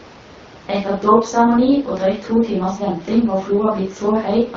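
No technical faults are audible.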